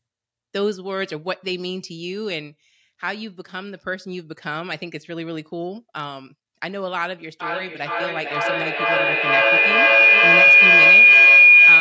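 From 7.4 s to the end at 11.8 s, a microphone-to-loudspeaker loop gains level on every pass, causing feedback howl. The speech is swamped by a tone near 2 kHz, with the loop repeating about every 400 ms, that peaks about 16 dB above the speech.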